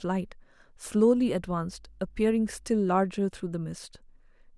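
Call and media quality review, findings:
Mains hum, 1.16 to 2.8 s: steady low 50 Hz tone under the speech, roughly 25 dB below it. Probable ground loop or nearby transformer coupling the power line into the signal. Spectrogram: thin horizontal line at 50 Hz; waveform: fine periodic ripple.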